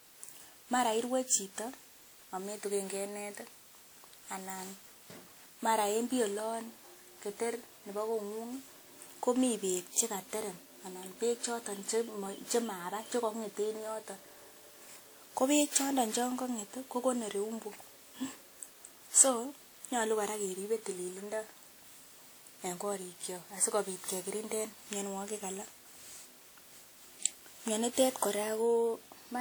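Generation loss runs through the whole speech clip. The sound is swirly, smeared and hollow, and attacks blur. Nothing sits above 20.1 kHz. The likely cause is about ten rounds of lossy re-encoding, which fits WMA at 96 kbit/s, each pass adding fresh quantisation noise.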